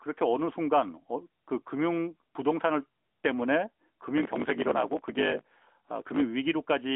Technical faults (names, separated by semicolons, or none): block size mismatch (truncated)